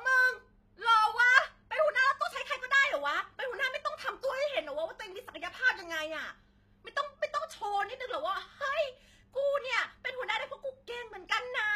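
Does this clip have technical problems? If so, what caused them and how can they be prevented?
Yes, the whole speech clip carries HE-AAC compression damage, likely from a low-bitrate encode around 20 kbps. The treble is rebuilt from copied lower bands rather than coded, so the s sounds come out gritty and metallic, with a bright but unnatural top end. To prevent it, encode at a higher bitrate or use plain AAC or Opus with enough bits to code the high frequencies directly.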